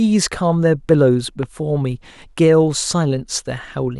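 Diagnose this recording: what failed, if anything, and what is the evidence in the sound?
A single loud pop at 1.43 to 1.45 s, a few decibels above the speech, which continues beneath it. A brief voltage pulse, likely a connector, switch or static discharge in the analogue wiring, was added to the signal. The waveform shows a narrow spike; the spectrogram shows a thin full-band vertical line.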